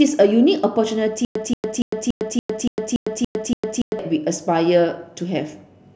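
Stutter with silent gaps from 1.25 s to 3.99 s: a 180 ms burst of speech repeats nine times, each followed by about 105 ms of dead silence, a steady 285 ms cycle. A stalled stream likely replayed its last fragment at each retry, losing the speech in between.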